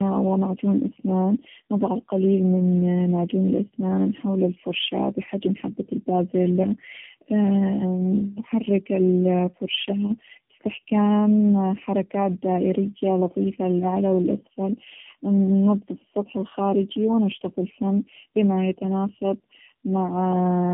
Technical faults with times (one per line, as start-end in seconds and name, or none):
0.00-20.73 tandem speech coding